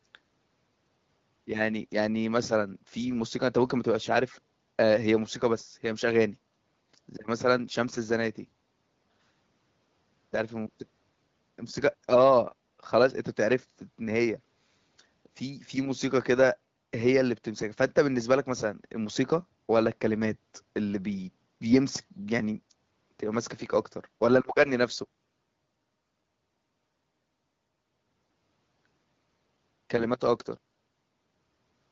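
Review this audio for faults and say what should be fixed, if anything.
Nothing needs fixing: the speech is carried over an AMR wideband (HD Voice) path at 12.65 kbit/s, a rate at which that codec keeps speech clear, and no faults can be heard in the signal.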